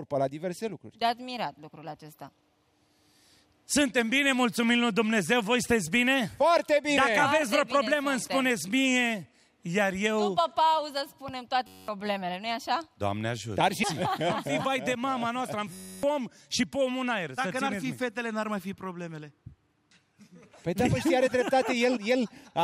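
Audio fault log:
11.67–11.88 s, system hang loop: a steady buzz near 94 Hz as one 10.67 ms slice repeats 20 times while the system stalls, which fits a 512-sample buffer, losing about a fifth of a second of audio.
15.73–16.03 s, system hang loop: the same 94 Hz buzz, longer, as the hardware cycles a frozen 10.67 ms buffer 28 times, dropping roughly 0.3 s.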